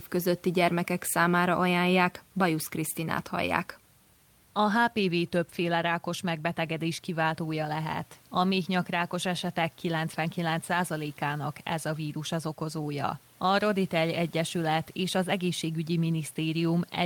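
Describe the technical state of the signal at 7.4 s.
At 7.4 s the speech signal is intact, with only the room's own background noise sitting about 34 dB below it.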